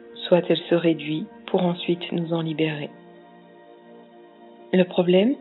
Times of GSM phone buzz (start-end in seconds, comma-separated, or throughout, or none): none